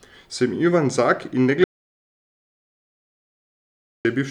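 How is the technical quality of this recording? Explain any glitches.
Audio dropout to silence from 1.64 to 4.05 s: the speech stops abruptly and is replaced by about 2.41 s of silence, with no room tone or background hiss underneath, before the sound resumes near the end. The likely cause is a lost input, such as a disconnected device, a failed link or an accidental mute, while the recorder kept writing silence. Whatever was spoken during that stretch is gone and cannot be recovered.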